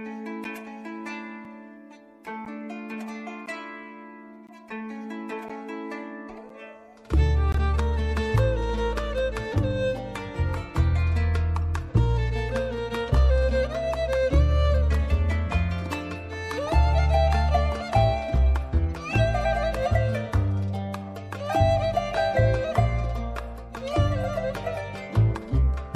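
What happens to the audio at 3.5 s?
At 3.46 s, a gap between stream segments opens: the timestamps of two adjoining pieces of the stream fail to line up, leaving a hole of about 12 ms that the player fills with silence. The boundary position fits a stream cut into 1-second segments. What you hear is a brief, hard-edged dropout, a tiny click-like blink where the sound stops and restarts abruptly, with nothing missing from the audio on either side.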